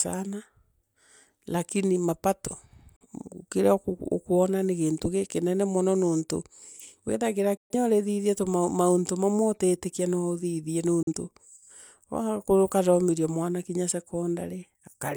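Digital broadcast dropouts hit at 2.96 to 3.06 s, between "lakini mapato" and "kiria ukwona ni gintu", then at 7.57 to 7.75 s and 11.03 to 11.14 s. Each time the receiver muted on corrupt frames, fading to silence within about 3 ms. The shorter holes fit one lost frame, the middle one about three.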